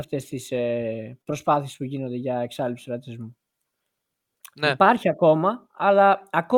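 At 1.21 to 1.29 s, the speech has a short stall from a late packet. A packet came late and the jitter buffer ran empty. The receiver stretched the last sound for about 51 ms, so it hangs with a slight buzz or dip. Nothing is lost. Playback resumes 51 ms later.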